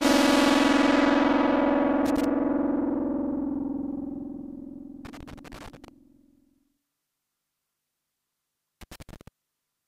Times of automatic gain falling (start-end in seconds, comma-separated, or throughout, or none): none